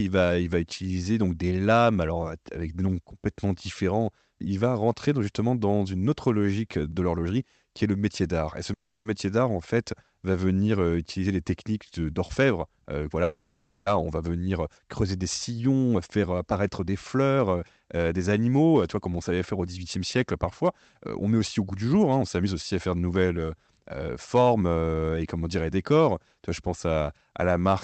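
At 8.73 s the speech stalls in a call audio freeze lasting until 9.07 s. The last sound is stretched into a fading buzz for about 320 ms, the final 160 ms of it silent, and the speech then resumes where it left off. Nothing is lost, but the audio is pushed 320 ms later. At 13.23 s a longer 630 ms freeze runs to 13.88 s, held as a decaying buzz throughout. Both are likely packets delayed until the jitter buffer emptied. On a spectrogram each appears as a smeared band of steady harmonics fading out, with a clear vertical gap in the first.

A jitter buffer speed-up follows from 15.95 s to 20.65 s. The receiver trims repeated pitch-period slices to drain its backlog, so the speech plays about 8% fast at unchanged pitch, shedding roughly 0.4 s in total. Two sharper bursts at 116% speed run from 21.21 s to 22.55 s (about 0.2 s removed) and from 24.39 s to 25.26 s (about 0.15 s removed), and sound hurried. 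In the waveform the syllables are compressed in time while harmonic spacing stays put, and the spectrum stops near 8 kHz from the Opus call path.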